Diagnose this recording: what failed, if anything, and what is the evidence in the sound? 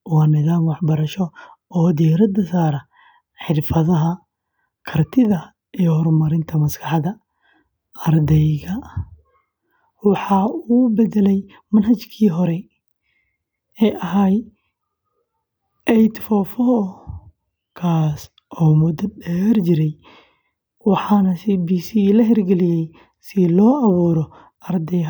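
Nothing failed at any stage.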